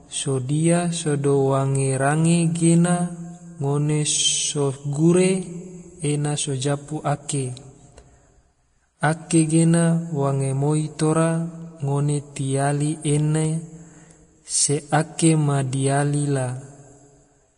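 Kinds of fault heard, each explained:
Vorbis compression: the speech has nothing above 10.6 kHz, and the remaining treble is grainy and hissy, with roughened tones and softened attacks. This is plainly audible damage, likely from low-quality Vorbis encoding, which fits a bitrate of around 33 kbps.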